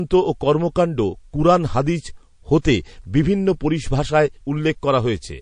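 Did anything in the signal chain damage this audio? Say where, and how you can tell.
Yes. At the codec stage, the speech has a watery, swirly quality throughout, with chirpy sibilants. This plainly audible damage is likely from MP3 compression at a low bitrate, around 40 kbps, which lets weak frequency lines flicker between frames.

A pre-echo sits at 2.62 to 2.65 s. A hiss rises about 14 dB over 28 ms before a sharp attack, which sounds smeared. The codec spread its quantisation noise across a long transform block, roughly 52 ms, and did not switch to short blocks.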